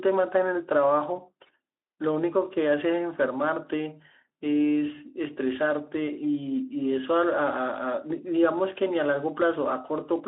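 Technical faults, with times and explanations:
1.15–1.20 s, VoIP packet loss concealed by the speech codec: one 20 ms frame of speech is missing, and the decoder fills it by extending the previous pitch and spectral shape at falling gain, so the sound smears into a brief buzzy tone or coloured noise that fades. Unlike a plain dropout, there is no silent gap or click. The voice stays weak or distorted for tens of milliseconds or more after 1.20 s as the decoder rebuilds its state, against the light Speex coding of the 300 Hz–3.6 kHz line band.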